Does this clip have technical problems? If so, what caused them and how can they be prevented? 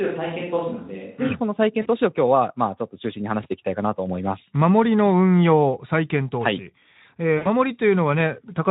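Yes. From the start until 1.29 s the close microphone's signal was likely lost or left out, so the recording falls back on a switch to a distant microphone. The sound is roomy and hollow with thinner bass, roughly 5 dB quieter, and the room noise sits only around 35 dB below the speech. When the close microphone returns at 1.29 s, the change back is abrupt. Checking the close microphone's connection and monitoring its channel before recording would prevent this.

VoIP packet loss concealed by the speech codec occurs at 1.82 to 1.87 s and at 7.37 to 7.47 s. Packets went missing and the decoder filled the gaps by extending the last pitch and spectral shape while turning the gain down. The first gap is about 40 ms, which fits two 20 ms frames. The second is about 80 ms, which fits four frames. Each gap comes out as a stretched, fading smear, and the sound stays weak briefly after data resumes. 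The light hoarseness from the Speex coding at around 15 kbps runs underneath throughout. A wired or more stable network connection, together with a jitter buffer and forward error correction, would reduce these losses.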